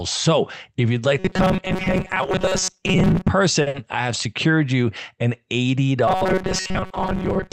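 Robotic sound from repeated short buffers runs from 1.19 s to 3.28 s, just after "if you'd like". The speech becomes a rigid, metallic buzz at 188 Hz that only loosely follows the words. The likely cause is new audio arriving too seldom: the receiver loops a tiny slice, which fits a buffer of about 5.3 ms, while most of the real audio is skipped.

A short stall from a late packet follows at 3.61 s to 3.68 s. A packet missed its slot, so the jitter buffer ran dry and the last sound was stretched for 50 ms before resuming at the same point. Nothing is lost, but the sound lingers with a faint buzz or dip.

A burst of packet loss comes straight after, from 3.68 s to 3.76 s, just before "I have secured you". About 60 ms of audio never arrived in time. The receiver extended and faded the previous sound, and the speech then picks up further on with that stretch missing.

The robotic buzz at 188 Hz returns from 6.08 s to the end of the clip, with the same looping of very short buffers as the likely cause again.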